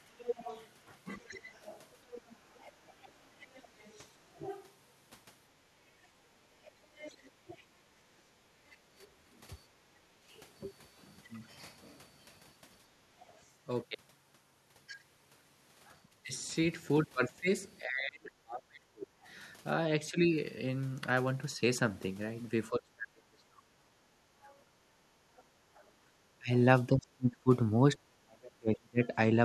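Background gated by the echo canceller, 0.0 to 0.1 s: the room tone dips by about 8 dB for roughly 70 ms as the canceller clamps the microphone while the loudspeaker plays.

Other side's voice leaking through, 0.18 to 13.36 s: a faint second voice sits around 20 dB under the speech, likely residual echo the canceller failed to subtract from the microphone pickup.

Speech suppressed in double talk, 1.18 to 1.5 s: the talker's voice sinks by around 20 dB for about 0.3 s, likely because both sides spoke together and the canceller attenuated everything.

Background gated by the echo canceller, 6.4 to 10.28 s: the ambience drops by as much as about 11 dB, adding up to roughly a second, each time the far end plays through.

Speech suppressed in double talk, 16.24 to 29.13 s: the voice repeatedly dips or breaks up, falling by as much as roughly 35 dB across about four seconds in total, likely from overlapping talk defeating the canceller.

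Background gated by the echo canceller, 24.13 to 25.85 s: the room sound falls by about 13 dB for around 0.7 s in total.

Other side's voice leaking through, 24.47 to 25.81 s: a very faint far-end voice emerges, roughly 30 dB below the speech, likely uncancelled loudspeaker echo.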